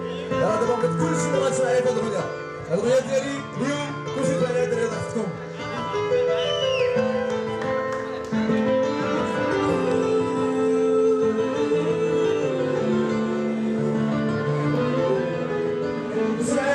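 No technical faults can be heard anywhere in it.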